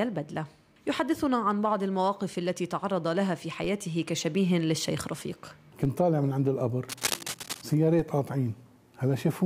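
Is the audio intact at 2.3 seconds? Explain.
Yes, the audio is intact at 2.3 seconds: nothing there breaks, drops out, distorts or clicks, and it runs on continuously through that moment.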